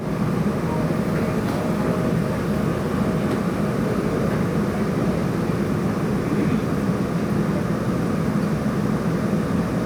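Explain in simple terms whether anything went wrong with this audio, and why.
Nothing went wrong here: the recording carries its sounds with no breaks, jumps or unexpected changes anywhere in it.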